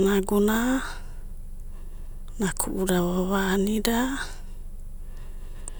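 From 0.72 s to the end, a high whistle near 10 kHz sits under the speech, some 40 dB below it, its pitch wandering only between 10.04 and 10.16 kHz. This is a switching supply whistle: a power supply running in an audible burst mode or beating with another.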